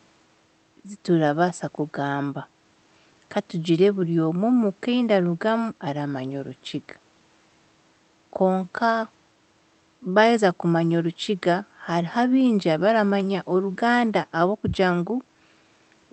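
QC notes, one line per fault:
No faults found in this speech clip.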